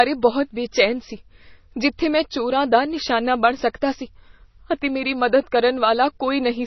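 Speech, with heavy codec damage from start to end. Nothing survives above 6 kHz. Quiet detail turns watery and swirly as weak components flicker in and out. Consonant attacks smear. The likely cause is MP3 compression at a starved bitrate, around 24 kbps.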